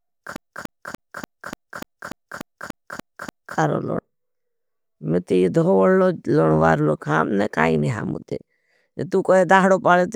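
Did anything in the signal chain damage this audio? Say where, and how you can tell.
Yes. The damage happened at playback, where the disc player got a CD stuck on one turn. From 0.36 s to 3.58 s the same slice of speech repeats 11 times. Each repeat lasts 0.29 s, and a brief mute marks every jump. The even, rapid stutter comes from the laser falling back one track at the same point on each revolution. A scratch likely causes this. The stutter stops at 3.58 s.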